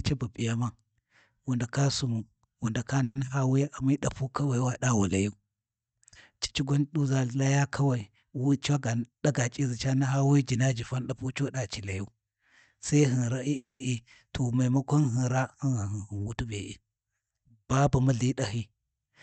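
A speech recording carrying two kinds of fault. A call audio freeze sits at 3.03 to 3.17 s, right after "wu ndaka" and before "naha wuya": the last sound is stretched into a brief fading buzz for 120 ms. A second runs from 13.56 to 13.82 s, filling 240 ms, of which about 150 ms decays to silence. The likely cause is packets stalling in transit until the jitter buffer ran dry. What separates this from a dropout is that nothing is lost: the speech resumes exactly where it stopped, simply pushed later by the inserted gap. Jitter buffer speed-up appears at 8.37 to 9.61 s, where delivery runs about 8% fast, and at 15.73 to 16.52 s, about 12% fast, each time trimming roughly a tenth of a second in total. The receiver shed a backlog of buffered audio by cutting out many tiny pitch-period slices in succession, so the talk sounds hurried while the pitch stays put, which distinguishes it from a sped-up playback that would raise the pitch too. 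Beneath all this, the Opus call path is audible as a top end that stops around 8 kHz.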